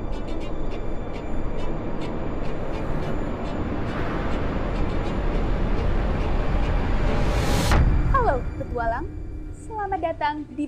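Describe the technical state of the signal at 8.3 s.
At 8.3 s the signal is intact, with no dropout, distortion, glitch or other fault audible at that point.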